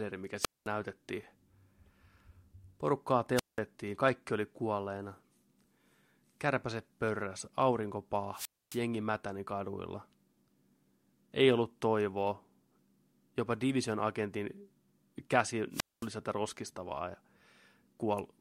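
Wireless microphone squelch dropouts occur at 0.40–0.68 s, 3.35–3.60 s, 8.33–8.80 s and 15.71–16.09 s. Each time the FM radio link weakens, hiss rises briefly before the receiver's squelch shuts the output, leaving silent holes of 212, 186, 266 and 223 ms before the speech returns. A spectrogram shows a short broadband noise wash followed by a blank vertical band, and the waveform drops to a flat line for each mute.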